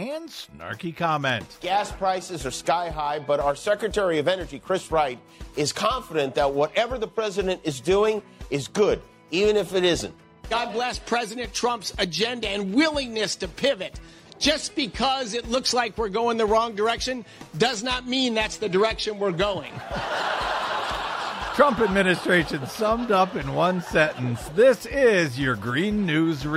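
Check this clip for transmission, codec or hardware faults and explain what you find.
Nothing stood out on listening that would point to a problem in how this audio was carried, encoded or played back.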